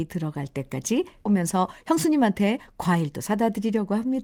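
At 1.25 to 1.27 s the speech makes a skip ahead. Roughly 0.4 s of audio never plays. It was dropped while later audio was already queued, either in transit or by an overflowing jitter buffer. Nothing fills the hole. The sound on either side is spliced almost directly together. The listener hears an abrupt jump forward, as if part of a word or several words vanished mid-flow.

From 1.35 to 3.27 s comes a jitter buffer speed-up. The buffer holds more audio than it targets. The receiver trims it by cutting out short slices, each one or a few pitch periods long, again and again. About a fifth of a second is removed this way. The speech runs at roughly 112% speed with unchanged pitch. It sounds rushed.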